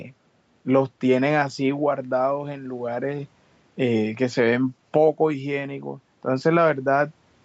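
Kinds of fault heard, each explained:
No faults can be heard in this speech clip. It has the sound of a call path, with the call codec's usual coding noise and nothing above 8 kHz, both normal for it.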